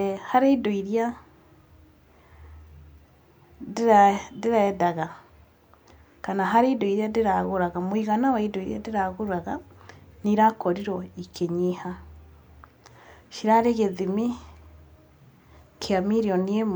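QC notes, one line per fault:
No technical faults are audible anywhere in the signal; level, continuity and timing hold steady across the whole recording.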